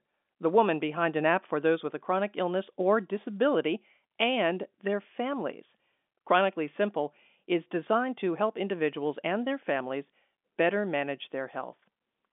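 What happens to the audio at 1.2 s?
Nothing goes wrong at 1.2 s: the speech carries on intact through that moment, with only the narrow, telephone-band sound of the G.711 line, which passes nothing above about 3.7 kHz.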